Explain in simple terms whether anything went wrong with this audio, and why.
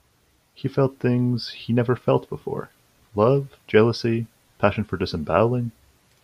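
Nothing went wrong here; no faults can be heard.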